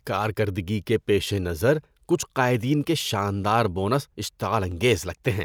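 The likely cause is dropped samples: the stream briefly loses a tiny run of samples, about 0.7 ms each time, so the waveform leaps straight to a later value. Far too little is missing to remove any sound, but each leap produces a single sharp click in the speech, seen as a thin vertical line across the spectrum. The first comes at 3.01 s, right after "قائدین کے", and the second at 4.72 s.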